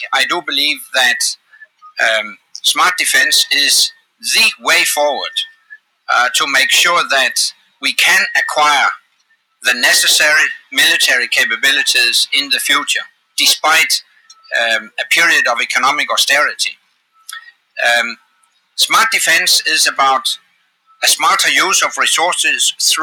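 Sound cut by the noise suppressor turns up at 0.79–2.57, 3.94–4.23, 5.52–6.08, 7.53–7.82, 8.99–9.63, 13.08–14.98, 16.74–18.77 and 20.38–21.01 s. The suppressor mistakes steady or fading sound for noise and ducks it by about 17 to 19 dB, so sustained parts sink and decays get clipped.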